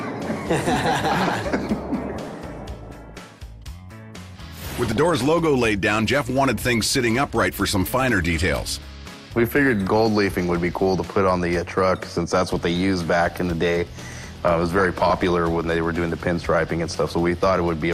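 DAB burbling breaks up the audio at 2.23–3.22 s, 4.91–5.21 s and 14.34–15.31 s. Bit errors of around 0.4 to 0.5 percent slip past error correction and corrupt the MP2 audio data, so short blips of noise appear.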